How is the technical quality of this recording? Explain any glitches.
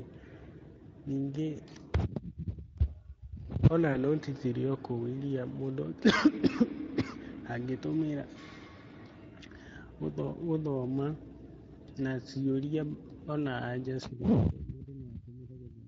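The recording is noticeably degraded by low-rate speech coding throughout, with one brief dropout.

Speex codec damage runs through the whole clip. The hoarse, grainy texture suggests a mid-range setting around 17 kbps, where too few bits describe the excitation. On a spectrogram the harmonics look smeared and noisy rather than cleanly striated.

A VoIP packet loss concealed by the speech codec occurs from 3.93 to 3.97 s, just before "nũti cirĩ o kũu". The gap, consistent with one lost 20 ms frame, was filled by extrapolating the previous pitch and filter at falling gain. It sounds like a short, fading smear. The waveform shows a repetitive, decaying stretch, and the spectrogram shows flattened, static harmonics.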